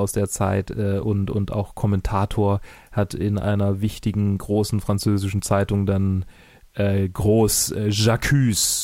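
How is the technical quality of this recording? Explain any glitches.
The speech recording has no technical glitches; the signal stays continuous and stable throughout.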